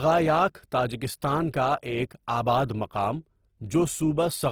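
From start to finish the speech carries plainly audible Opus compression damage, likely from an encoder starved of bits in its music (CELT) mode, with a rough, grainy edge to the voiced sounds in place of a clean tone. The band energies survive, but the detail inside them has been patched with folded or noise-like content, so it sounds less hollow or swirly than MP3 damage, just coarse. The top end still reaches about 20.4 kHz, so it isn't muffled; the graininess fits a rate around 16 kbps.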